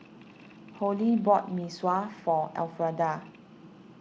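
Nothing goes wrong technically in this bit of speech, so there's no fault to point to here.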